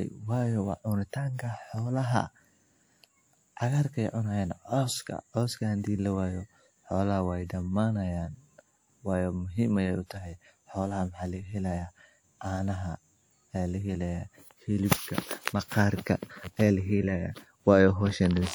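Pre-echo at 14.86 to 14.91 s: a short hiss of about 51 ms runs ahead of a sharp attack in the speech. The transform codec spread quantisation noise, sized for the loud onset, across the quiet stretch before it, so the attack sounds smeared.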